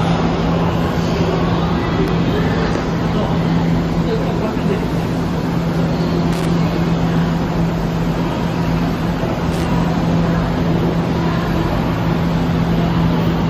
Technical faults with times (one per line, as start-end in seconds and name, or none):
6.33-6.47 loose connector crackle
9.52-9.65 loose connector crackle